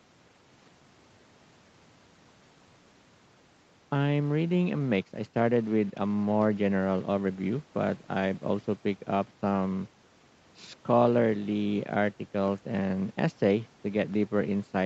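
Nothing goes wrong anywhere in this speech, which comes through a normal call chain with its top end stopping at about 8 kHz, just as you'd expect from an ordinary call.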